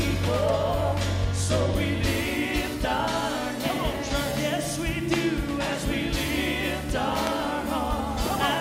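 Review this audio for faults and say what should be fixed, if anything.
Loud pops at 5.14–5.16 s and 7.27–7.29 s, likely voltage steps from a switch or static, spike roughly 20 dB over the sound: sharp waveform needles, full-height spectrogram lines.

Prevent them by securing cables and grounding equipment, and by not switching gear during recording.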